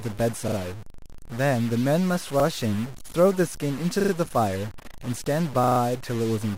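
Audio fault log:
Throughout: stuck bit. A distortion rides on the speech, and the pauses fill with a steady hiss. This is likely one data bit held fixed, shifting about half the samples. Unlike clipping, it persists at low levels and in silence.
0.48–0.56 s, 2.40–2.44 s, 4.00–4.12 s, 5.64–5.80 s: repeated buffer. A 40 ms slice of speech plays again two, one, three and four extra times, with a hard join at each repeat, heard as a rapid stutter. No audio is skipped. Unlike a dropout, the sound repeats rather than going silent.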